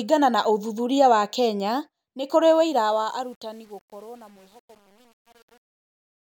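From 2.51 s, after "nĩ kũrĩ", the fade-out shows truncation distortion on a fade: undithered, roughly 8-bit steps turn its tail gritty from 3.02 s to 6.27 s.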